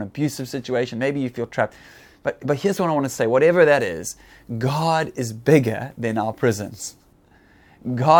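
Right after "say whatever that", from 3.80 to 7.13 s, there's pre-emphasis left on. The treble boost was never undone by the matching de-emphasis, so highs sit about 8 dB up at 10 kHz, which fits the CD 50/15 µs curve. The speech turns thin, bright and hissy on sibilants.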